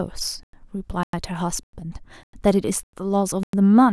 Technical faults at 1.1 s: gap between chunks

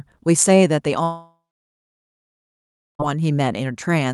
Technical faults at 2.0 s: long network dropout

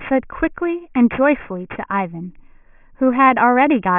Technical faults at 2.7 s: aliasing

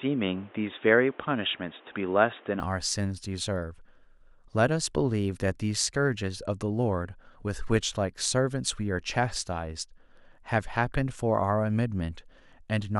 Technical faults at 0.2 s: input switched to a poorer device

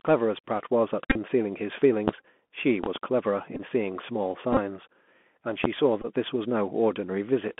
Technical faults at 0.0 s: Bluetooth CVSD headset codec

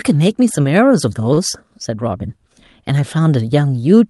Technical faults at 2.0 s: none

